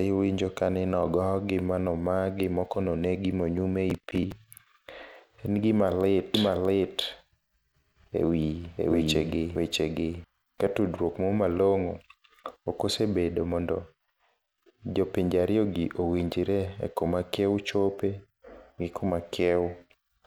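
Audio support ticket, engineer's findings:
Processor overload crackle, 3.90–4.68 s. CPU missing audio deadlines repeatedly; about ten short buffers, roughly 10 ms each, not filled in time. Stale audio replayed per miss with hard edges; gritty crackle over speech, clears when load drops.

Doubled audio track, 6.34–10.24 s, from after "gima lit" to before "ka tudruok". Likely second, slower capture path mixed in. Full-band duplicate trailing roughly 0.7 s, near-equal level, dry, no room colour; starts and stops abruptly.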